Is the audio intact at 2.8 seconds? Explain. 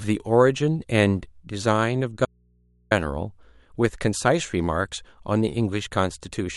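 No. At 2.8 s the speech sits inside an audio dropout to a faint residue running from 2.25 to 2.91 s. The wanted signal is likely lost upstream while the input stays live, so only mains hum remains, roughly 40 dB down. The cut is abrupt on both edges, unlike a natural pause or a fade.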